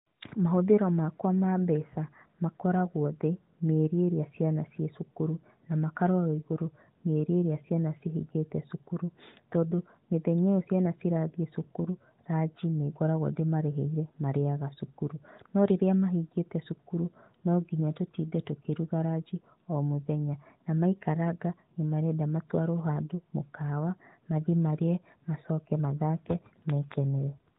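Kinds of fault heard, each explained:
Nothing in this speech clip stands out as a fault, so there's nothing to list here.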